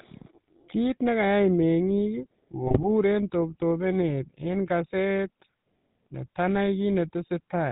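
It's a speech recording that's been through the GSM full-rate codec the whole way, so everything above 4 kHz is gone and the voice has that buzzy, gravelly texture from a vocal-tract model driven by coarse pulse excitation. The damage is plainly audible, and it fits the old 13 kbps full-rate scheme. Then from about 2.64 to 2.85 s, just before "toptopenet en kaset", there's a burst of GSM bit errors. Corrupted filter, pitch and gain values turn the speech into squawky, gargling garbage for roughly ten frames, which points to an error rate of around 2% on a weak link.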